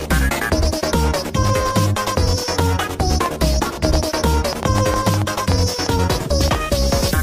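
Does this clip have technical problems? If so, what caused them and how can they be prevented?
Yes: a train of clicks from 2.60 to 6.56 s, about 20 irregular pulses at roughly 4.6 per second, peaking about 15 dB above the sound. They are likely from nearby equipment interference or a faulty connection or power supply. They show as thin vertical spectrogram lines and sharp waveform spikes. Prevent this by moving the interface away from interfering devices and using a stable, well-powered interface.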